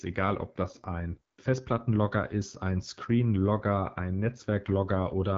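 Throughout, a low-rate AMR wideband (HD Voice) codec, fitting 8.85 kbit/s, leaves the speech plainly rough and raspy, with nothing above 7.3 kHz.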